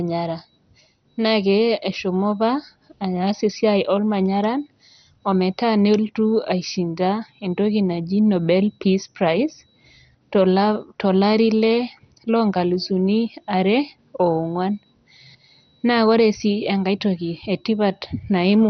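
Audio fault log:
Throughout, MP2 compression: the speech is dull, with nothing above about 6.1 kHz. Upper bands drop out and flicker back in. What remains has a gurgling, granular edge. The cause is likely heavy MPEG Layer II coding. It splits the sound into sub-bands and shares out a tight bit budget. Starved upper bands get no bits and switch off. The rest are coarsely quantised. The damage fits a low rate, around 48 kbps.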